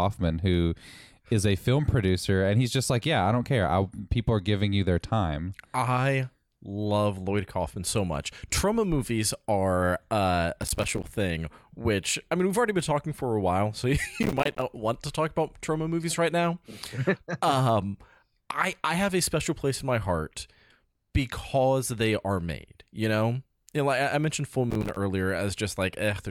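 Speech with three bursts of processor overload crackle, at 10.62–11.11 s after "movies are uh a", 14.23–14.62 s before "want to talk about", and 24.71–24.96 s: gritty tearing where dozens of roughly 5 ms buffers missed their deadlines and dropped to silence.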